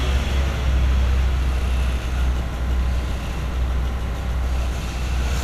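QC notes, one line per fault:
No faults heard in this audio.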